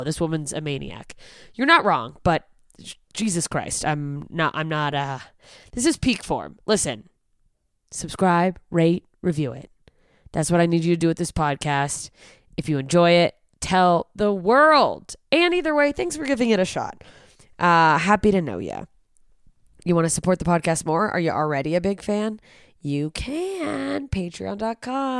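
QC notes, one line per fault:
No faults were found in this speech clip. Nothing needs to be logged for it.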